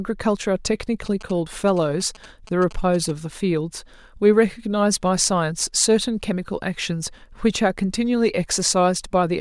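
GSM signalling bursts run from 1.06 to 3.11 s. A 2G phone near the recording chain is transmitting short clusters of radio bursts, the pattern of a handset signalling rather than carrying a call, and the audio circuitry rectifies that RF into the speech path. It sounds like a galloping dit-dit-dit of brief buzzes at about 217 Hz, sitting roughly 20 dB under the speech.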